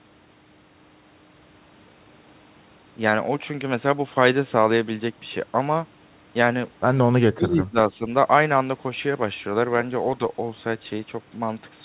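From 7.35 to 7.76 s the speech sinks by roughly 20 dB, then dips again by about 10 dB from 7.92 to 8.02 s. This is speech suppressed in double talk. The echo canceller likely could not separate this side's speech from the loudspeaker echo and turned both down.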